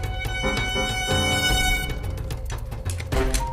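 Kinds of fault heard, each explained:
Time-stretched section: from 1.39 s to 3.52 s the pace abruptly jumps to 1.57 times normal while pitch holds steady, giving a rushed sound, likely from software squeezing the passage to a set length by dropping short pieces.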